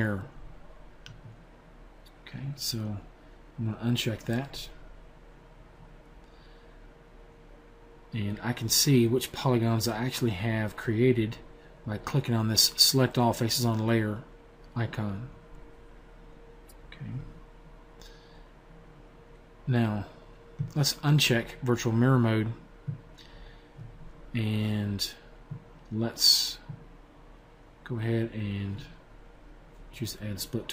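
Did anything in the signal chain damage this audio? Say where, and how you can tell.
No, nothing stood out on listening that would point to damage at any stage of the signal chain.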